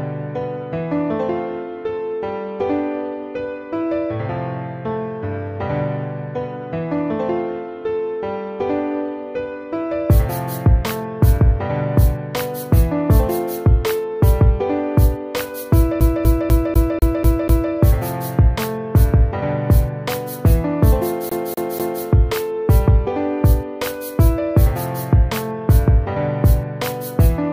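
At 16.00 s the audio sticks like a CD stuck on one turn: a 0.25 s slice repeats seven times until 17.73 s, with a tiny mute at each jump. It happens again from 21.29 to 22.03 s, three repeats, as the laser keeps hopping back a track.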